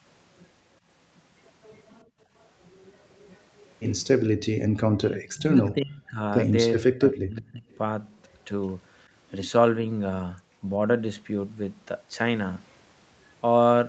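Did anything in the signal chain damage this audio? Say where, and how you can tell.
Yes, all of it in the call processing stage, around the echo canceller. First, an echo leak: a faint copy of the speech trails by 366 ms at 1.84–2.48, 3.11–3.69, 5.66–5.71 and 7.71–8.38 s, roughly 30 to 35 dB down. That's likely far-end loudspeaker sound the canceller didn't fully remove.

There's also background gated by the echo canceller at 2.04–2.18 and 4.51–4.71 s. The room tone briefly drops, by about 25 dB and then about 40 dB, and comes straight back. The canceller is clamping the microphone while the loudspeaker plays.

Then speech suppressed in double talk, at 4.99–6.19 and 6.74–7.65 s. The talker's voice sinks by something like 30 dB or more. That's likely the canceller failing to separate local speech from echo while both sides talk, and ducking everything.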